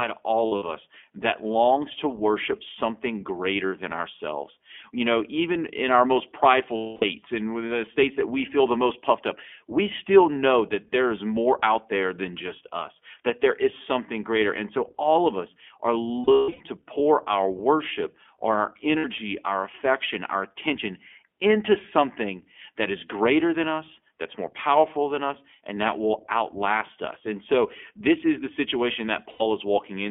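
Throughout, the speech sounds band-limited, slightly rough and synthetic, as the iLBC codec passes roughly 200 Hz to 3.4 kHz at about 15.2 kbps with 20 ms frames. Brief held, buzzy vowel-like patches come from lost iLBC frames, where the decoder repeats the last pitch cycle with noise, then recovers almost at once: 0.46 to 0.64 s (120 ms lost, scattered, longest run around 70 ms), 3.66 to 3.72 s, 6.76 to 7.04 s (260 ms), 16.24 to 16.62 s (300 ms scattered, longest about 150 ms), 18.98 to 19.05 s, and 29.30 to 29.43 s.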